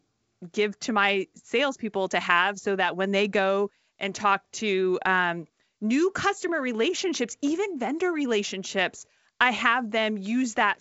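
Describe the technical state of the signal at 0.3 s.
At 0.3 s the speech is intact, with no fault present; it passes through G.722 wideband telephone coding at 64 kbit/s, so nothing sounds above roughly 7.7 kHz.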